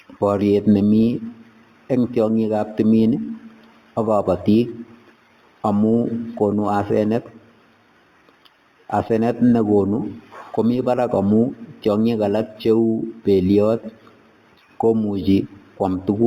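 Throughout, the speech was upsampled by straight lines between samples, which fits an 8 kHz source raised to 48 kHz. This imaging from linear upsampling dulls the highs and leaves a faint mirror image from 4 kHz to 8 kHz, about 35 dB down, heard as metallic shimmer on sibilants.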